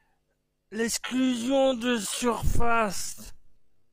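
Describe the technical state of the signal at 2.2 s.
Processing software has likely slowed this part of the speech to fill a longer duration, holding the pitch steady by repeating short fragments of the signal. At 2.2 s the signal sits inside that time-stretched section, which runs from 1.0 s to the end of the clip and plays at about 0.575 times the original speed. From 1.0 s the pace drops abruptly while the pitch stays unchanged, and the speech drags.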